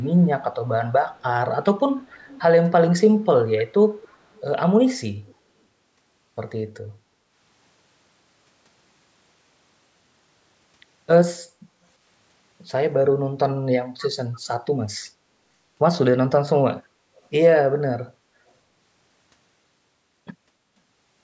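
Echo leak at 0.0–0.12, 1.11–1.23, 2.07–2.42, 3.36–3.61, 4.02–4.41, 5.26–5.34, 14.02–14.39 and 17.16–17.21 s: faint scraps of speech repeat 288 ms late, roughly 20–40 dB down, likely from loudspeaker pickup the echo canceller missed.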